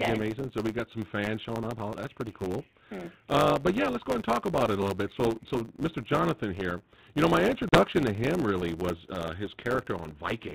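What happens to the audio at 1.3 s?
At 1.3 s you're hearing the block size mismatch (truncated) that runs through the whole clip. One stage writes longer blocks than the next reads, likely 512-sample ones, and each block's tail gets dropped. That leaves a 100 Hz buzz and speech running about 1.07 times fast at roughly normal pitch, all heard through the band-limited sound of 32 kbit/s G.726.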